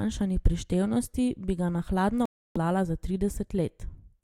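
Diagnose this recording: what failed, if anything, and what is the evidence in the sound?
Bluetooth dropout from 2.25 to 2.57 s, just after "bi ga na hladno": the speech cuts to silence for about 0.3 s with abrupt edges, then resumes further along. This points to the wireless playback link, likely packets arriving too late and being discarded.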